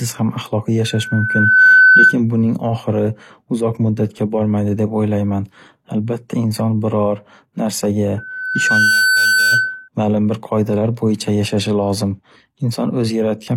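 At 0.84 s a loudspeaker feedback squeal starts: a pure tone near 1.5 kHz swells over roughly 0.7 s and sits about 10 dB above the speech until 2.16 s. The microphone is picking up its own loudspeaker, and at that frequency the loop gain exceeds one. The squeal returns from 8.18 to 9.89 s at the same pitch, building just as quickly but weaker, about 5 dB above the speech.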